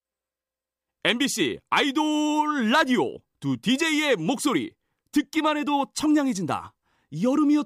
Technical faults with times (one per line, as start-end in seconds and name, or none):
none